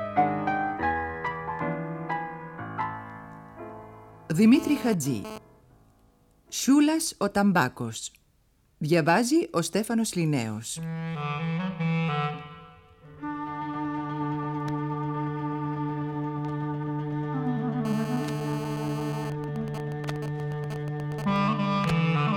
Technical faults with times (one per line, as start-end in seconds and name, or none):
4.54-5.38 GSM phone buzz
17.85-19.27 GSM phone buzz
19.27-21.36 GSM signalling bursts